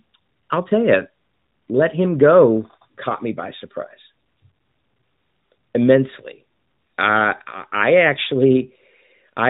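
No technical faults are audible.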